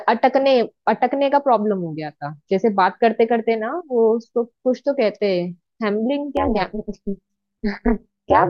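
From 6.37 s to the end, overlap-add ripple sets in. Badly overlapped frames make the level swing about 60 dB around 200 times a second, a metallic buzz.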